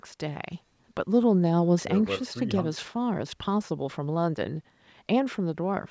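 No faults are present in this speech; the only processing heard is the normal call microphone chain, with its high-pass trimming the lowest bass and nothing above 8 kHz.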